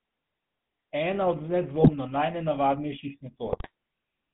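The clip is speech carried through the GSM full-rate codec for its whole length. The sound is confined to roughly 150 Hz to 3.6 kHz and has a plainly audible buzzy, gravelly roughness, which fits a 13 kbps vocal-tract model driven by sparse, regularly spaced pulses. GSM bit errors break in at 1.8 to 1.9 s and again at 3.47 to 3.70 s. Corrupted filter, pitch or gain values reach the decoder there. The speech bends into brief squawks, pops and gargling, and the later burst runs longer.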